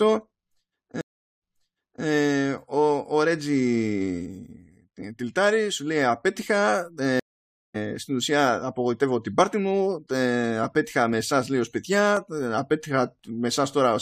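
At 1.01 s the stream drops out and you get about 0.4 s of silence before a stream reconnect kicks in at 2.05 s. The player has spun up a fresh decoder mid-stream, and the server resent a chunk, so the speech picks up 0.64 s earlier than where it cut off and repeats itself briefly. It happens again from 7.20 s: 0.55 s of dead air, then the audio comes back at 7.76 s on "στην ουσία απογοητεύω την", skipping ahead roughly 0.3 s.

Right after "απογοητεύω την πάρτη μου", from 10.11 s to 13.19 s, there are periodic USB or driver dropouts. Something in the background is stalling the bus or driver every 1.024 s, and each stall blanks out around a millisecond of audio with silence. You hear it as four or so evenly spaced little ticks riding on the speech, like a metronome you didn't ask for.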